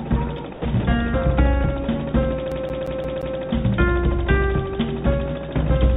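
At 0.53 to 0.65 s and again at 0.80 to 0.83 s, the sound gives way to flat, steady noise for 120 ms and then 30 ms. This is likely sound dropped by the voice detector, which misread the signal as background and let comfort noise fill the gap.

From 2.52 to 3.39 s, the CD is stuck on one turn. The same 175 ms segment plays five times, each jump marked by a brief mute, giving the quick, even stutter of a skipping disc. The call path's band limit leaves nothing above 4 kHz throughout.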